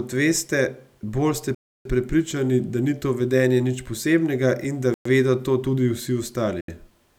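At 1.55 s, right after "veste bolj ste", the speech drops to silence for about 0.31 s. It resumes at 1.85 s with "prepričani da ni to". A second gap runs from 4.94 to 5.05 s, about 0.11 s, between "nič posebnega in da" and "vedo to tudi". A third, about 0.07 s, falls at 6.61 s. Each is a Bluetooth stall, likely from interference delaying packets until the headphone buffer emptied and playback halted.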